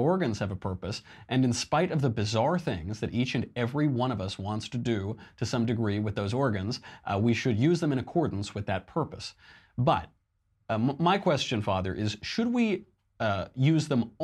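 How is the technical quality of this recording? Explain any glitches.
Nothing in this speech recording stands out as a glitch, so there's really nothing technical to explain here.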